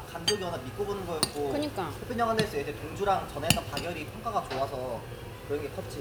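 No technical faults are audible.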